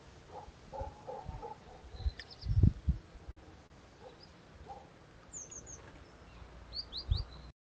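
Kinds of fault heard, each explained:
Short stall from a late packet: at 3.31 s and 3.67 s the sound is held 51 and 35 ms while the jitter buffer waits, then continues where it stopped; unlike packet loss, nothing is skipped.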